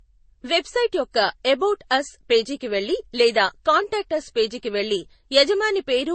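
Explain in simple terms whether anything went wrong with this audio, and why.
Something did go wrong, and it lasts the whole clip. The speech sounds dull, with the artefacts of two codecs heard together and nothing above about 8.4 kHz. These mixed artefacts point to transcoding between lossy codecs, likely an MP3 copy re-encoded as Vorbis. The second codec wasted effort preserving the first one's damage, added its own, and could not restore the lost treble.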